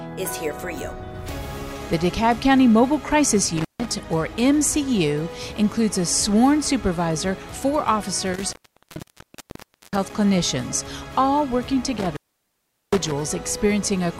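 A loose cable or plug connection repeatedly breaks and remakes contact, an intermittent contact fault. The sound drops out with crackle at the edges and faint hiss underneath: about 150 ms at 3.57 s, 1.4 s at 8.33 s, and 760 ms at 11.98 s.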